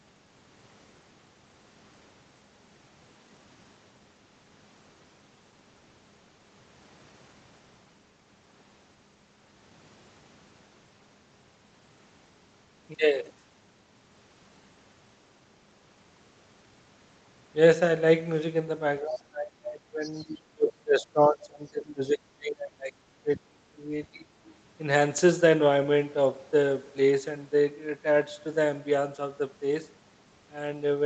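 From 19.0 to 20.05 s the talker gets pushed down hard, roughly 25 dB at the worst point. That's speech suppressed in double talk, likely because both ends were speaking at once and the echo canceller couldn't tell the near voice from loudspeaker echo, so it ducked everything. It comes back at 20.22 to 23.59 s with dips reaching down to around 30 dB across most of that stretch, then a light ducking of about 5 dB at 23.78 to 23.92 s, and a deep, roughly 35 dB cut at 24.09 to 24.4 s.

Right in the gap, at 20.02 to 20.24 s, there's the other side's voice leaking through: a faint second voice, about 20 dB below the talker, that the canceller likely didn't fully strip out of the mic feed. It's brief, barely a fifth of a second, with everything above 8 kHz gone like the rest of the band-limited call audio.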